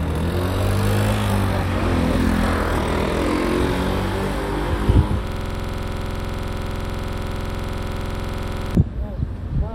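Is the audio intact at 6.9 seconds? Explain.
No. At 6.9 seconds the audio is caught in a system hang loop that runs from 5.27 to 8.75 s. The system froze while the sound hardware kept replaying the same stretch of its ring buffer. A 46.44 ms slice repeats exactly, about 75 times, which fits a 2048-sample buffer. It cycles at 21.5 Hz. The result is a rapid, rough stutter that sits close to a low buzz, with no new sound coming through.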